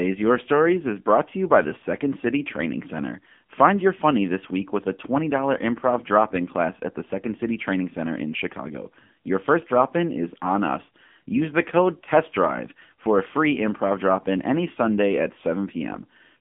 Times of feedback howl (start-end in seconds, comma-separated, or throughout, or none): none